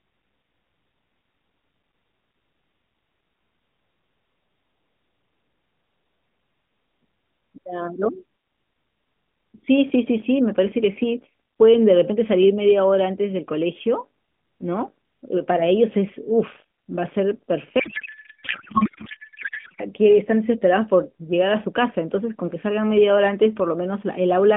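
From 17.8 to 19.8 s the speech gives way to garbled noise and warble that barely tracks it, a codec payload misread. Octet-aligned AMR frames are being unpacked as bandwidth-efficient, so every field lands in the wrong place. The band-limited AMR narrowband sound returns at 19.8 s.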